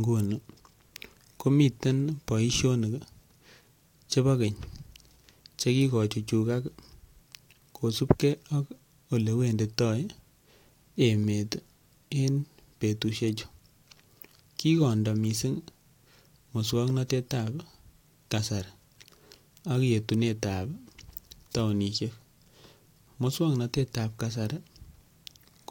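No technical faults can be heard anywhere in this speech recording. There is nothing in the audio that needs a timestamp or further comment.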